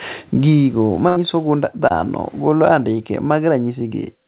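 From 1.08 to 1.18 s the sound is held and fades, then jumps ahead. This is a burst of packet loss: about 80 ms never arrived, and the receiver stretched the last sound instead. At 1.88 to 1.92 s, just before "golo andike", there is a brief smear from short concealed packet loss, where roughly 20 ms was patched over by continuing the preceding sound.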